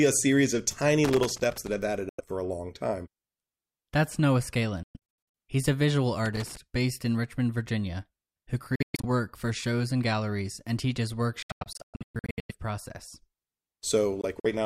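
Right after "a series of tiny", from 1.04 to 1.78 s, there's loose connector crackle: a worn contact making and breaking, chopping the speech into ragged scratchy bursts. It comes back from 6.26 to 6.57 s, between "a visual" and "based in".

Then the gaps, likely Bluetooth dropouts, where packets arrived too late and the output just went silent before picking up further along. First at 2.09 to 2.21 s, about 93 ms missing, just before "for a long time". Next from 4.83 to 5.34 s, several holes adding up to about 325 ms, the longest around 116 ms. Then 8.75 to 9.05 s, about 209 ms lost in pieces, and the worst from 11.42 to 12.52 s, about 743 ms lost in chunks up to 116 ms. Last, 14.21 to 14.46 s, about 70 ms in short bites.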